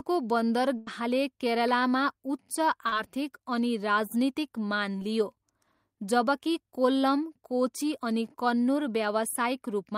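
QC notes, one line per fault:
0.77 to 0.89 s, burst of packet loss. About 100 ms of the speech went missing in one run. The receiver covered 91 ms of it by carrying the last sound forward and turning it down as the gap grew. A voiced sound turns into a held, dying buzz, and an unvoiced one into a fading hiss. The speech then picks up further along, and what fell in between is gone.
2.89 to 2.94 s, short concealed packet loss. A 40 ms stretch arrived too late for the decoder. The receiver patched 35 ms of it by extending the preceding sound, following its pitch if it was voiced or using shaped noise if not. It then crossfaded back into the real speech. The patch is too short to register as a gap. It comes across as a brief smear or wobble instead.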